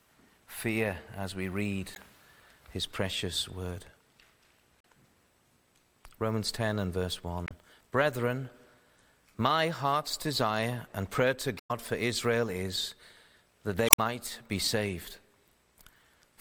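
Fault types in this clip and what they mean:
Damaged data in a compressed stream: five garbled bursts of 0.05 to 0.16 s where the decoder misreads frames.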